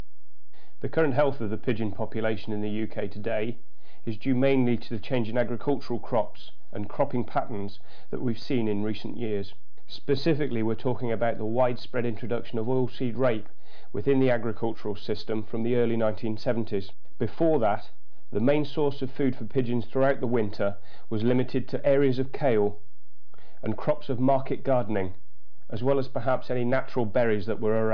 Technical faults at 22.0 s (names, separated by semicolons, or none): none